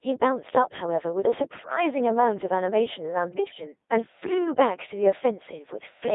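Codec 2 vocoder, throughout: the speech is rebuilt from pitch, voicing, energy and a spectral envelope, not the original waveform. It sounds robotic and buzzy, heavily damaged, confined to 300 Hz to 3.7 kHz, at 2.4 kbit/s.

Bit errors on digital voice radio, at 3.32 to 3.58 s and 5.70 to 5.82 s: flipped bits, around 5% and then 2%, corrupt whole vocoder frames' pitch, level and tone settings, so the synthetic speech jumps and breaks into warbling gibberish.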